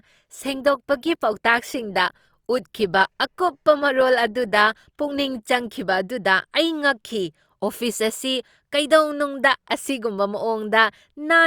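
Speech here, and the first 6.0 seconds are an adaptive stream starting at a low bitrate: the treble's thin and smeary with stronger codec artefacts, which fits something like 24 kbit/s Opus, then it snaps cleaner with no gap, consistent with stepping up to roughly 64 kbit/s.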